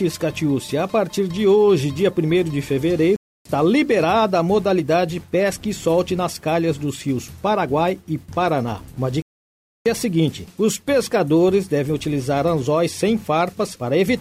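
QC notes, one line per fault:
3.16–3.45 s and 9.22–9.86 s, playback stall: the player likely ran short of buffered data or had its output thread held up, so nothing reached the output until it caught up. The sound cuts off abruptly mid-flow and drops to silence, for about 0.29 s the first time and 0.64 s the second, then carries on.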